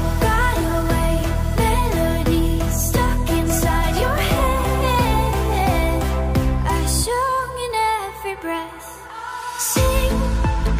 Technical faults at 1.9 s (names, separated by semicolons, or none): none